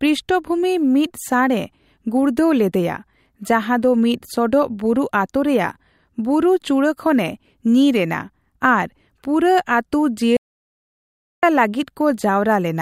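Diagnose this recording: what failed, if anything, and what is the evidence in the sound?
An audio dropout to silence follows "ᱮᱱᱟ ᱟᱨ ᱯᱩᱨᱟᱹ ᱟᱹᱛᱩ" from 10.37 to 11.43 s. For about 1.06 s the speech cuts to silence with no room tone: a flat waveform line and a blank spectrogram column. The input device or link was likely lost while recording continued.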